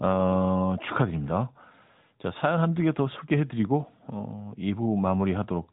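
From start to finish the speech carries AMR narrowband mobile codec damage, with a buzzy, synthetic edge that fits a high-rate mode near 10.2 kbps. The vocal-tract model rebuilds each frame from sparse pulses, and a spectrogram shows everything above 3.8 kHz cut away.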